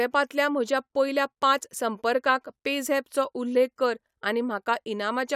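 Nothing stood out on listening to this speech clip.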